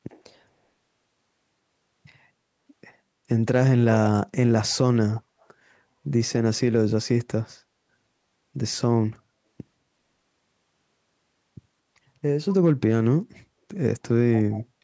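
A speech recording in which an echo canceller on the far end of a call, likely one feeding a loudspeaker, let part of its microphone pickup through, so an echo leak returns a faint copy of the talker about 174 ms late. It surfaces in short scraps at 0.09–0.22 s, 5.16–5.22 s, 5.41–5.45 s and 14.39–14.64 s, ranging from roughly 40 dB down to about 20 dB below the speech, loudest at the end. The band stops at 8 kHz, as expected from call microphone processing.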